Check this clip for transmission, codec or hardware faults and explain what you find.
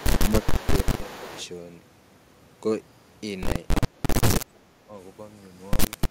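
Two faults are present in this speech: an echo leak early in the clip, and speech suppressed in double talk at five points.

Echo leak, from 0.0 to 0.2 s and from 0.4 to 1.46 s: one side's echo canceller likely failed to remove loudspeaker pickup, so the signal came back. A faint copy trails the speech by about 335 ms, roughly 15 dB below it.

Speech suppressed in double talk, at 0.23–0.33 s, 0.52–0.76 s, 1.06–1.34 s, 3.8–3.96 s and 4.47–4.89 s: the canceller likely mistook overlapping talk for echo and attenuated it. The speech dips briefly, by around 5 to 10 dB early on and around 20 dB in the later two.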